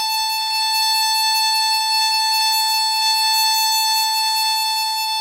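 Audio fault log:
No audible faults in this music clip; nothing to log.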